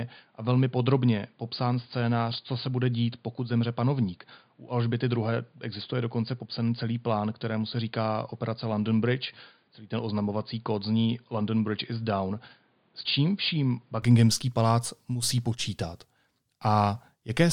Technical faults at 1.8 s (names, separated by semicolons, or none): input switched to a poorer device